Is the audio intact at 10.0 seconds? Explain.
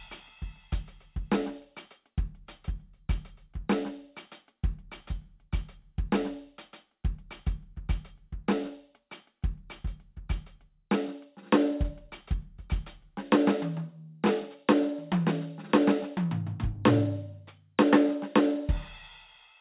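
Yes, at 10.0 seconds the music plays through with no audible technical fault.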